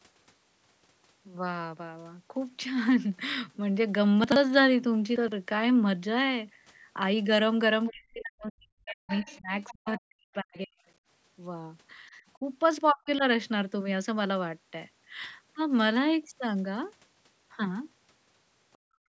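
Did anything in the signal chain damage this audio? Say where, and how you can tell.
Yes. In the driver or buffer stage, chunks out of order: audio blocks of about 40 ms were written late and played after the blocks meant to follow them. At 4.24 to 4.36 s one block lands two places late, and at 5.16 to 5.32 s one lands three places late, giving jumbled fragments.

In call processing, the echo canceller likely left residue, so the other side's voice is leaking through from the far-end loudspeaker. Faint second-voice scraps appear at 7.86 to 7.92 s, 9.09 to 9.38 s, 9.62 to 9.74 s and 10.54 to 10.58 s, roughly 15 to 30 dB below the talker.

Also in call processing, speech is suppressed in double talk. The canceller likely could not separate the talker from loudspeaker echo while both spoke, so it attenuated everything. The voice dips by roughly 40 dB across 7.91 to 9.52 s and 9.73 to 10.78 s, and about 35 dB at 12.92 to 13.25 s.

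In the same call-processing stage, the background is gated by the echo canceller. While the loudspeaker was active it clamped the microphone hard, so from 18.78 s to the end at 19.08 s the room sound drops by about 37 dB.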